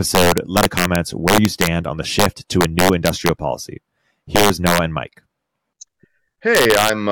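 From 0.15 to 1.67 s, just before "on the", the loudest speech peaks hit integer overflow: pushed about 4 dB past the limit, they wrap to the opposite sign instead of clipping, giving harsh cracks. At 0.63 s, damaged data in the compressed stream makes the decoder lose sync and search for the next frame header. More overflow cracks follow at 2.20–2.26 s right after "on the", then 2.61–3.29 s and 4.36–4.78 s, and finally 6.55–6.89 s with about 2 dB of overdrive.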